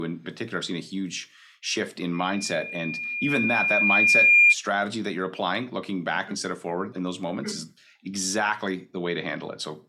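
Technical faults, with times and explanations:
2.13 to 4.55 s, loudspeaker feedback squeal: a single piercing tone at 2.4 kHz rises out of the speech, swelling over about two seconds until it sits roughly 15 dB above the voice, then stops at 4.55 s. The microphone was picking up the loudspeaker it was driving. At 2.4 kHz the round trip through mic, amplifier and speaker returned more energy than it sent out, so that one frequency fed on itself and kept growing into a squeal.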